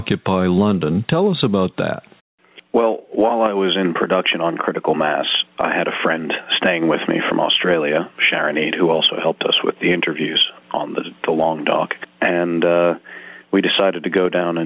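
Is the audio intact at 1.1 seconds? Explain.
No. Gain pumping runs through the whole clip, including 1.1 s. The likely cause is a microphone gain set far too high, with a fast limiter or compressor clamping it down whenever a loud sound arrives. The level swings by around 10 dB, flattening the dynamics. Separately, nothing is heard above 4 kHz, which fits a telephone-grade call codec such as G.711 mu-law.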